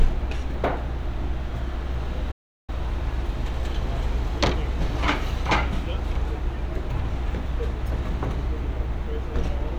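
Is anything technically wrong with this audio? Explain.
Yes, there's one problem. From 2.31 to 2.70 s there's a playback stall: the sound drops to silence for about 370 ms, most likely because the player ran short of data, then picks up again.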